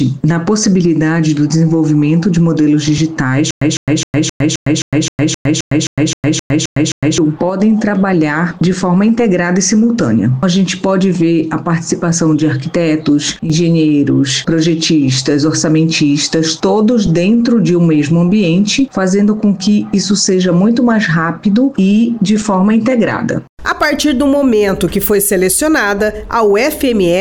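From 3.51 to 7.18 s there is a stutter with silent gaps: a 155 ms fragment repeats 14 times at a steady 262 ms period, each followed by 107 ms of digital silence. The likely cause is a stalled stream replaying its last fragment at each retry, so the intended audio is lost.

At 7.49 to 7.60 s a sudden gain jump drops the level by about 5 dB, and at 13.36 to 13.50 s another cuts it by about 7 dB. Sound and background noise shift together, most likely from a digital gain change applied without a ramp.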